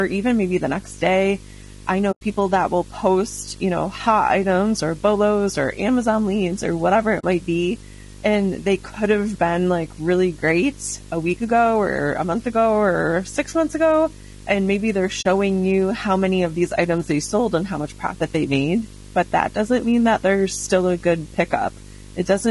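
A buzz at 50 Hz runs under the speech from start to finish, at about 20 dB below it, with a fizzy hash above the fundamental and a thin whistle at 15.6 kHz. This is video or display buzz: a screen or video cable is coupling into the audio path, and the buzz repeats at the picture's field rate. Ordinary mains hum would have neither the hash nor the line-rate tone, and that tone is what separates the two.

Throughout the clip the speech is rough and grainy. Noise fills the gaps between the pitch harmonics, and the top band sounds flat and synthetic rather than airy. The likely cause is low-delay AAC compression of the AAC-ELD kind used in video calls, at a rate that fits about 32 kbps. Its short frames resolve harmonics poorly, so the damage stays with the voicing as a constant texture instead of coming and going like bursty packet problems.

The speech drops out three times, each a case of AAC frame loss with muting. 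From 2.11 to 2.22 s, after "the next day I" and before "that will post you", about 100 ms goes silent, which fits roughly five frames. Shorter gaps of 40 ms fall at 7.19 to 7.24 s, between "leads or whatever it" and "might be", and at 15.21 to 15.25 s, between "maybe they're" and "you how many of". Each hole fades out and back in smoothly, because the decoder zeroed the spectrum of the missing frames and the overlapping windows soften the edges. A hard cut or clicking dropout would have abrupt edges instead.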